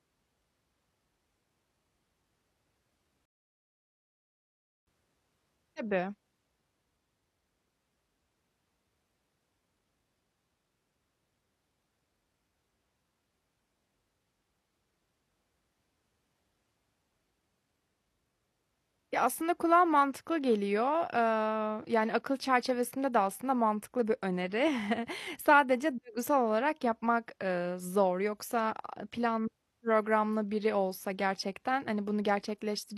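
At 3.25 s the speech drops into silence and holds there until 4.87 s. This is a rebuffering stall. The player ran short of downloaded audio and waited for more. Playback then picks up exactly where it paused, so nothing is skipped. About 1.6 s of dead air is added.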